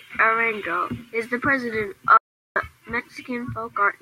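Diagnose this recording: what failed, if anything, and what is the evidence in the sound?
The speech cuts off abruptly at 2.17 s and returns mid-flow at 2.56 s. The roughly 0.39 s between is dead digital silence, with no room tone or background hiss underneath it, and whatever was spoken in that stretch is simply gone. That is an audio dropout to silence. The likely cause is a momentary loss of the input upstream of the recorder, such as a disconnected device, a broken link or a brief mute, while the recording stage went on writing silence.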